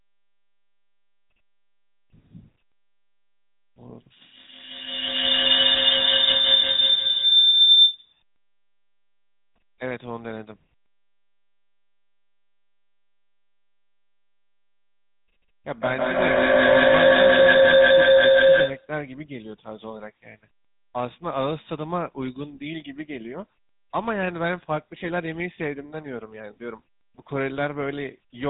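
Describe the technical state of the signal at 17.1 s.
At 17.1 s the signal sits inside a feedback howl running from 15.81 to 18.99 s. Two devices on one call form a loop whose gain exceeds unity, so repeats grow rather than fade, narrowing to a tone near 500 Hz with a loop delay of roughly 150 ms, and peak about 12 dB above the speech. Unlike a decaying echo, it keeps building until the loop breaks.

Throughout, including this moment, the GSM full-rate codec leaves a buzzy, gravelly roughness on the speech, and nothing passes above 3.9 kHz. That fits a 13 kbps GSM full-rate stream. It differs from plain band-limiting, which would sound muffled but smooth rather than rasping.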